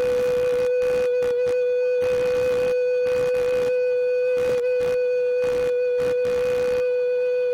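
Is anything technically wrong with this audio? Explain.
Yes, there are two faults.

Computer activity noise runs throughout: the machine's load changes disturb the shared audio ground, adding a buzzing chirp at roughly 70 pulses per second, about 20 dB below the sound.

Compressed frames skipped at 4.48 s: several frames never reach the output, so the audio jumps ahead by about 150 ms, which fits roughly 23 ms frames.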